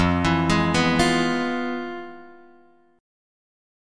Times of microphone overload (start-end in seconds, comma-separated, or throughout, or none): none